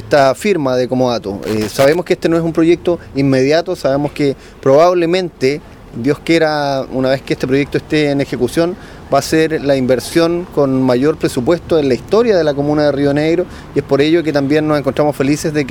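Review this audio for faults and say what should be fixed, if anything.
Loose connector crackle runs from 1.43 to 1.95 s, a burst of roughly half a second of irregular scratching and crackle. A worn or dirty contact somewhere in the signal chain was shifting, so the circuit kept opening and closing many times in quick succession. Each break chopped the audio, and any DC sitting on the line turned those breaks into clicks. The stretch should be repaired with declicking or replaced. To prevent it, clean and reseat the plugs and swap out worn cables before recording.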